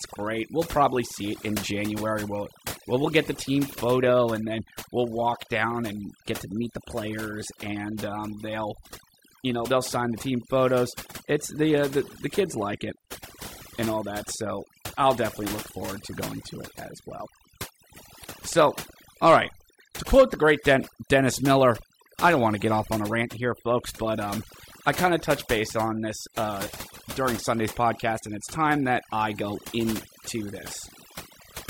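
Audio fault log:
throughout, overdone noise removal: the noise reduction is set far too hard, so frequency bands sitting near the estimated noise floor are pulled down or cut entirely. Low-level parts of the speech vanish with them, leaving near-silent gaps full of twinkling specks.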